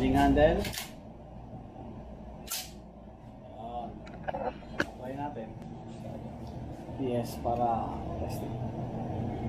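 The audio carries three short glitches caused by damaged data in a compressed stream. They fall at 3.35 to 3.40 s, at 5.62 s, and at 8.18 to 8.23 s. Each is a brief chirp, squawk, click or short hole. Here part of the coded stream was wrong. The decoder misread the frames at those points and lost sync. It then had to hunt for the next valid frame header before clean sound resumed.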